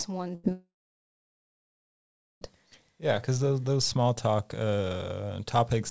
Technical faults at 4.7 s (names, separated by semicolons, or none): none